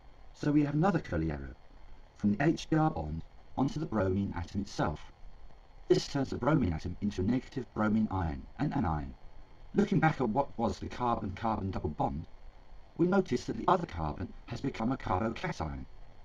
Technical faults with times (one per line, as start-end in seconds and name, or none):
none